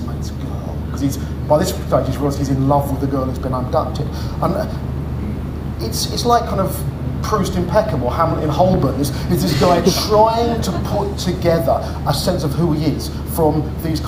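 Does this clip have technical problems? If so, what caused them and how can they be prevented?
Yes. A single loud pop at 8.74 to 8.77 s jumps about 10 dB above the sound, which carries on underneath, unlike a dropout. It was likely a voltage pulse from a plug, a switch or static. Secure connections and switch equipment only while it is muted.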